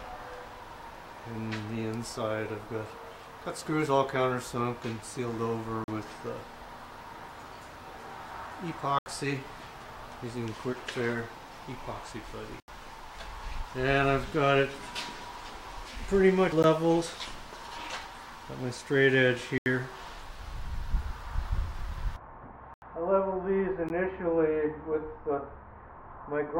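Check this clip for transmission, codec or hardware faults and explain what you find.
Seven blocks of digital silence interrupt the audio. The longer gaps fall at 5.84 to 5.88 s (40 ms), 8.99 to 9.06 s (75 ms), 12.60 to 12.68 s, 19.58 to 19.66 s and 22.74 to 22.82 s (80 ms each). Two brief ones land at 16.63 s (14 ms) and 23.89 s (15 ms). Each time the output buffer likely went unfilled and was sent as zeros. The sound drops to dead silence and returns with no fade. The 80 ms blocks are heard as short holes, and the 14 to 15 ms ones as sharp ticks.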